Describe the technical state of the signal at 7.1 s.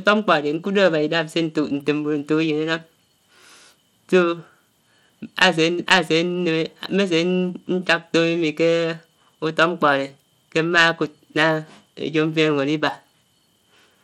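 At 7.1 s the speech sounds gritty and dull, its treble flickering in and out. As throughout the clip, the likely cause is Bluetooth SBC compression starving the upper sub-bands of bits.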